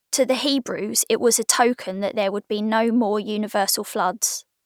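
No faults can be heard anywhere in this speech recording.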